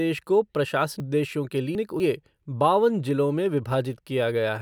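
Speech, with chunks out of order from 1.0 to 2.0 s: one 250 ms chunk plays three chunks late, jumbling the sound, with three hard seams seen as vertical breaks.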